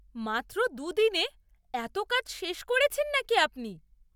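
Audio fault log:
Nothing to log here, as the speech comes across with no faults worth noting anywhere in the clip.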